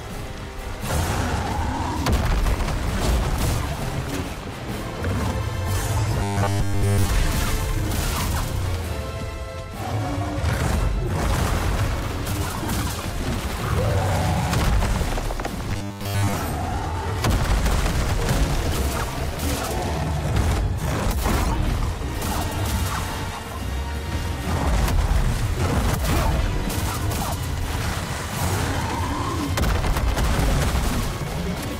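From 6.23 to 7.09 s, and again from 15.71 to 16.33 s, the audio turns into a rigid, metallic buzz at 100 Hz, robotic sound from repeated short buffers. This likely comes from a 10 ms buffer being repeated while new data is late, fully in the first stretch and for most of the second.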